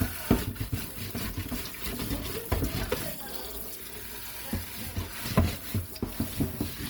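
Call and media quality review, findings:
Opus compression, throughout. Grainy, rough, noisy texture on tones, plainly audible. Likely a low-bitrate Opus music-mode encode, near 24 kbps. Band folding and noise fill. Full bandwidth, to about 20 kHz.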